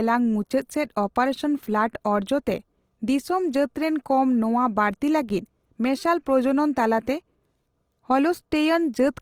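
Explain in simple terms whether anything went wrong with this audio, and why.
Something did go wrong: from start to finish, the speech has a grainy, rough texture, as if fine sand were mixed into it. That points to Opus compression, likely squeezed hard. Unlike MP3 damage, there's little watery swirling, and the high end stays bright rather than muffled.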